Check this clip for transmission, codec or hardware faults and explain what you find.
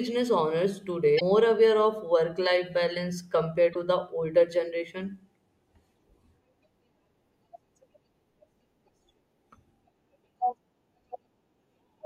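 Two short faults, both from damaged data in a compressed stream, at 1.17 to 1.22 s and 3.71 to 3.76 s in the speech. Each lasts about 50 ms. Corrupted bytes in the encoded data make the decoder misread the affected frames and lose its place. It then has to search for the next valid frame header before normal decoding resumes. Each event is heard as a brief chirp, squawk, click or short hole cutting into the speech.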